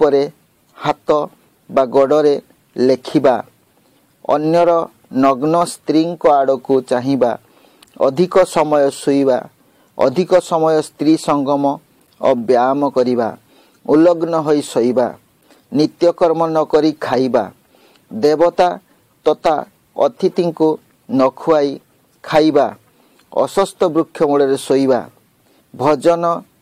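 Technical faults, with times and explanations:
No technical faults detected.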